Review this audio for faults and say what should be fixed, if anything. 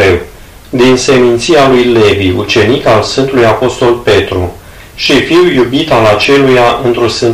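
Hard clipping runs throughout. Peaks overshoot the limit by about 14 dB, flattening roughly 15% of samples into harsh fuzz. Reduce gain before conversion.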